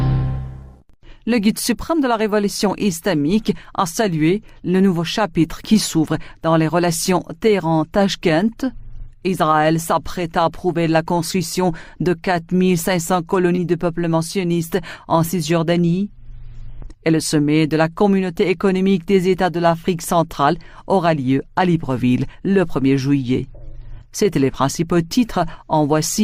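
At 13.55 s, short concealed packet loss occurs. About 20 ms of audio failed to arrive in time. The receiver filled the gap by extending the preceding sound, then blended back into the real signal by 13.59 s. It sounds like a brief smear or wobble.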